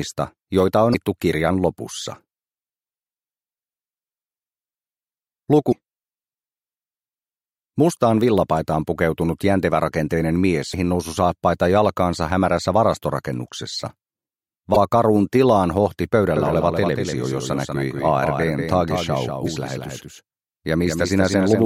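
At 0.90, 5.68, 10.70 and 14.72 s there are brief blips of damaged data in a compressed stream. Each lasts about 40 ms. Corrupted frames throw the decoder out of sync. It hunts for the next header.

From 16.37 s to the end, a doubled audio track appears. A second full-band copy trails by around a fifth of a second, about 5 dB quieter. It has no room colour. It most likely comes from a second, slower capture path. It cuts in abruptly.

At 19.42 s, another 40 ms corruption blip comes through the doubled sound.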